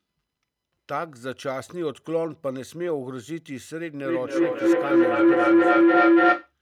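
Feedback howl runs from 4.05 to 6.54 s. A microphone is picking up a loudspeaker carrying the same call, and each trip around that loop returns the sound louder than before. The repeats build rather than decay and narrow to a low tone of around 300 Hz, pulsing roughly every third of a second. At its peak the howl sits about 12 dB above the speech, then stops when the loop is broken.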